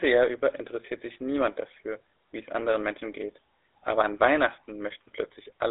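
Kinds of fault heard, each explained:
GSM full-rate codec: speech was rebuilt by GSM coding from a vocal-tract model fed sparse pulses, leaving plainly buzzy, gravelly roughness and nothing above 3.8 kHz.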